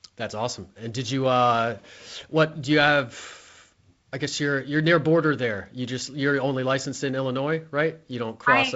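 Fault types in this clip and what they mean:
The speech has passed through G.722 wideband telephone coding at 48 kbit/s, so nothing sits above 7.7 kHz, a light hiss sits in the upper band, and the low bitrate leaves slightly noisier lower-band coding, with no fault present.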